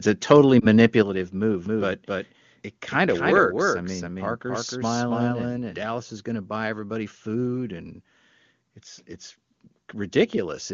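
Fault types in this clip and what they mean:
Microphone overload: The input gain was likely set too high, so around 0.31 to 0.33 s the loudest peak ran about 4 dB past the converter's ceiling and its top was sheared off, giving that moment a harsh, crackly edge.
Lost AMR speech frames: One 20 ms frame failed to arrive intact, so the decoder rebuilt it from the previous frame's settings at reduced gain. Between 0.59 and 0.67 s this shows as a brief dip or warble before the sound recovers.
Microphone volume stepped down: The call software likely judged the input too hot and cut the device gain in single steps, about 5 dB at 1.02 s and about 2 dB at 3.51 s. Each time, foreground and background drop together abruptly.
Doubled audio track: A second copy of the signal was likely mixed in, trailing the original by roughly 0.3 s at about equal level. From 1.66 to 5.86 s everything repeats as a dry, full-band echo that starts and stops abruptly.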